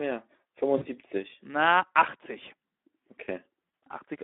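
Speech that sounds hoarse and grainy throughout, squeezed into a narrow telephone band of about 250 Hz to 3.6 kHz. This is Speex codec damage: the CELP coder has too few bits to model the excitation, and the coarseness fits a setting of around 11 kbps. At 0.77 to 0.85 s and again at 3.69 to 3.71 s, the sound smears into a brief buzzy tone or coloured noise that fades. This is VoIP packet loss concealed by the speech codec: the decoder stretches its last pitch and filter to bridge roughly 40 ms and 20 ms of missing audio.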